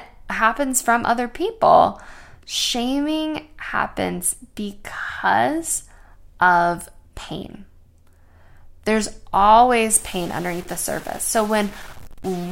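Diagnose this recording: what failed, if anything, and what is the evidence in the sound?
From 9.90 s to the end, the speech turns harsh and buzzy, and the gaps between phrases fill with a steady hiss instead of falling quiet. That points to a stuck bit, likely at the converter or its data lines. One bit held at a fixed value throws about half the samples off by a step of roughly -35 dBFS, so the waveform gains distortion, and the bit flipping as small values change sign keeps noise alive through the pauses.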